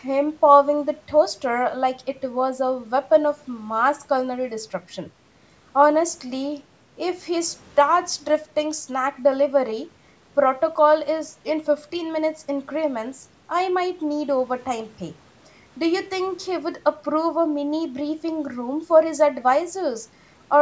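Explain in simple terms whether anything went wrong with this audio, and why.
Nothing went wrong here: the speech went through the usual microphone processing of a call, which trims away the deepest bass and leaves nothing above 8 kHz, and that is normal for a call rather than a fault.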